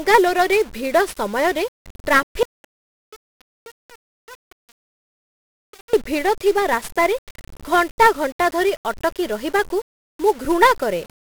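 From the start, the speech carries 1-bit DFPWM compression, fitting a 48 kbps stream. One bit per sample leaves heavy fuzz and crackle, with hiss burying the treble.

At 2.43 s, an audio dropout to a faint residue begins, likely a lost input. Only a trace remains, far below normal level. Speech returns abruptly at 5.93 s with "ଭିଡ଼ଥିବା ରାସ୍ତାରେ".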